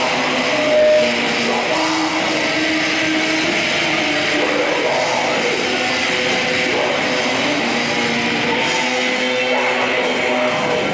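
From 0.31 s to 1.40 s a loudspeaker feedback squeal appears: a microphone is re-capturing its own loudspeaker output, and at 610 Hz the loop gain exceeds unity. The tone swells over roughly half a second to about 5 dB above the surrounding sound.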